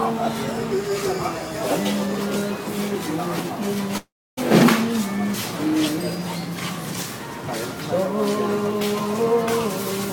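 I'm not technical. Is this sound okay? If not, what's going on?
No. At 3.97 s the sound turns into a fading buzz, then drops to near-silence for about 0.3 s before returning at 4.39 s. This is a long network dropout, likely caused by a stretch of audio that never arrived. The player extended the last bit of sound for roughly 0.4 s while it faded, then had nothing left to play. When the sound resumes, about 0.4 s of the original is simply gone.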